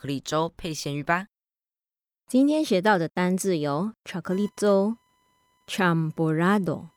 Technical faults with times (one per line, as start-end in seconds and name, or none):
4.32-6.97 computer activity noise